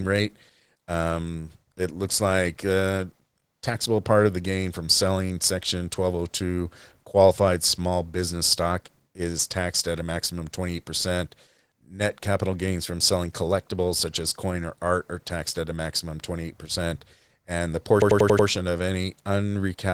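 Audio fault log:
Throughout: Opus voice compression. The codec runs at 16 kbps in hybrid mode, pairing a linear-prediction layer with a transform layer for the top band. Coarse coding of the excitation is plainly audible. The speech sounds muffled, hoarse and somewhat robotic.
18.02 to 18.48 s: system hang loop. The system froze while the audio hardware kept replaying one buffer. A 92.88 ms piece repeats five times at 10.8 Hz, which fits a 4096-sample buffer. It sounds like a machine-gun stutter.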